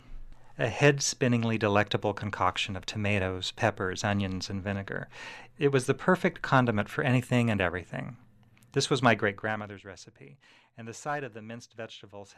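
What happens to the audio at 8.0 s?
At 8.0 s the audio is intact, with no fault at that moment.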